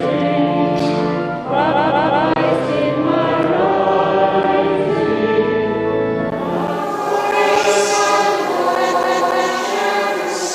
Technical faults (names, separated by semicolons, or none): repeated frames